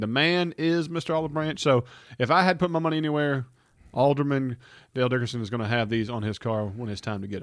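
Nothing stood out as a technical fault on listening to the speech here.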